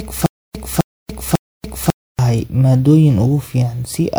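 From the very start until about 2.19 s, the player or stream likely stalled repeatedly, replaying its last fragment at each retry and then running dry, which is a stutter with silent gaps. The pattern is already under way when the clip begins: a 260 ms burst of the same speech repeats three times, each followed by about 290 ms of digital silence, on an even 547 ms cycle. Whatever should have played during those stalls is gone.

Throughout the clip, the audio shows generation loss, most likely from being decoded and re-encoded with MP3 a few times at settings that fit 128 kbit/s. Each pass requantised the signal on a shifted frame grid, so the errors piled up. The speech sounds swirly, smeared and hollow, more degraded than a single encode at that rate would leave it, and consonant onsets lose their crispness.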